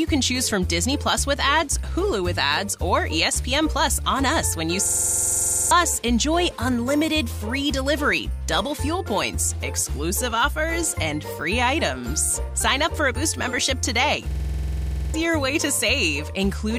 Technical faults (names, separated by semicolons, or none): system hang loop